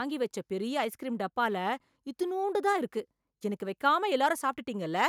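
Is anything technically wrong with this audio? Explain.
No, nothing technically wrong stood out on listening to this recording.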